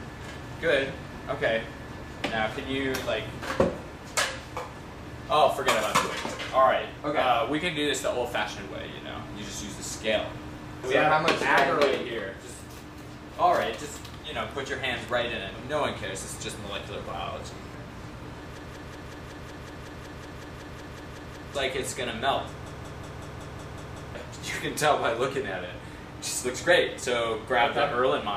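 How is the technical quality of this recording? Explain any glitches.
Two system hang loops spoil it. From 18.58 to 21.55 s and again from 22.66 to 24.15 s, a 186 ms slice repeats at about 5.4 Hz, 16 and then 8 times, a machine-gun stutter. The machine froze while the hardware kept replaying its ring buffer, which fits an 8192-sample buffer. Around three seconds, then another second and a half, of audio are lost.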